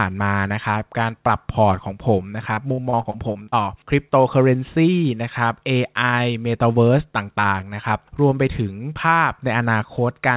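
From 2.54 to 3.55 s the speech breaks up with repeated packet loss, giving a robotic sound. Over about one second there are eight short holes, the longest about 59 ms, and each is bridged by stretching the preceding sound, so roughly a quarter of that stretch is filler rather than real speech. Unlike a single dropout, which leaves one clean gap, this is a rapid chain of patched holes, heard as choppy stuttering. Throughout the clip nothing is heard above 4 kHz, which fits a narrowband call codec such as G.711.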